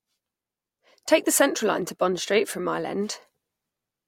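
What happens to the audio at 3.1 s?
Nothing goes wrong at 3.1 s: the speech there plays through without any dropout, glitch or other technical fault.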